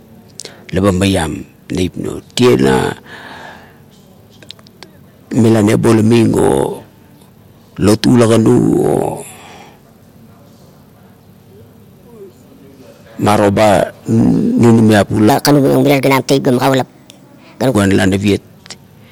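A section at the wrong speed, 15.30 to 17.75 s, plays 1.35 times fast, roughly five semitones higher, likely from a mismatched playback clock.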